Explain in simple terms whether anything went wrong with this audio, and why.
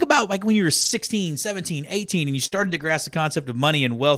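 Yes, two kinds of network fault affect this speech clip.

From 0.81 to 0.91 s, and again from 2.52 to 2.90 s, there is a lost packet rebuilt from error correction. Pieces of the call went missing in transit, but each following piece carried a cruder backup copy, and the receiver played that instead. Nothing drops out, yet those stretches sound rougher and noisier, the second one noticeably longer at about 0.4 s.

Just before that, from 2.47 to 2.54 s, there is a short concealed packet loss. About 40 ms of audio never arrived in time, and the receiver had no backup for it, so it guessed by extending the preceding sound and then blending back into the real signal. The result is a brief smear or wobble, and a short sound there may simply be lost.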